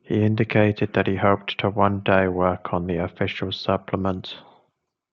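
No technical faults are audible anywhere in the speech.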